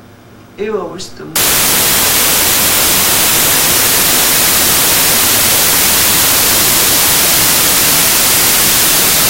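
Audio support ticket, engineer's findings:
Wrong sample width from 1.36 s to end (9.30 s): 32-bit integer data unpacked as packed 24-bit, so byte boundaries slip and most sample values are assembled from mismatched bytes. Heard as loud broadband noise over buried sound, playing at 0.75× speed with lowered pitch.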